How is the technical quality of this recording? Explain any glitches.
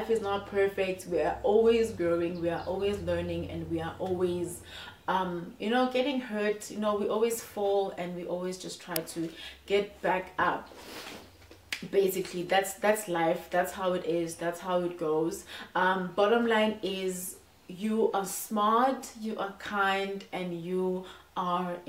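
There is one glitch. At 8.96 s an uninitialised buffer was played out before any audio had been written into it, so stale memory came out as samples: a very brief, loud crack about 3 ms long, which fits a 128-sample buffer.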